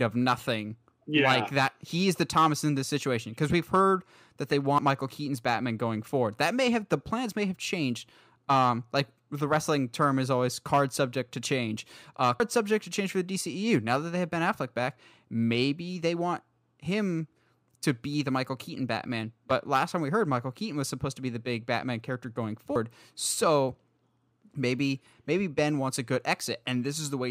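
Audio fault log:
4.78 s, dropped buffer (overrun), just after "we've heard that they": a forward jump, roughly 50 ms of speech missing, likely from samples overwritten before being read.
12.40 s, dropped buffer (overrun), just before "subject to change for": a jump with about 150 ms skipped, the two sides butted together without any silence between.
22.76 s, dropped buffer (overrun), right after "character going": an abrupt jump as around 150 ms vanishes, where the audio skips ahead.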